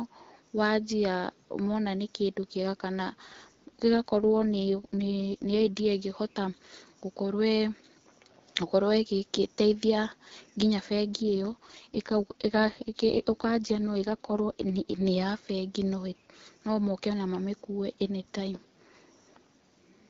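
From 4.18 to 5.86 s, and again from 11.19 to 15.05 s just after "ĩgĩteithia nginya", the speech shows an AMR rate drop. The codec steps down from its usual rate to one that fits 6.6 kbit/s, spending bits on error protection instead, so the speech turns rough, raspy and synthetic. Unlike a bandwidth switch or packet loss, the band stays the same width and nothing cuts out. The light AMR-WB coloration is heard again once the rate recovers.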